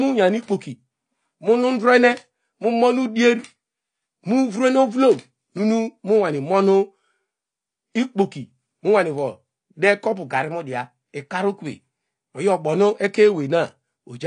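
Speech, with codec damage plainly audible from start to finish. Nothing sounds above 9.9 kHz. Sibilants come out dull and smeared, with a fizzy, warbling edge. The cause is likely AAC compression, AAC-LC at a low bitrate. The sound fits about 32 kbps.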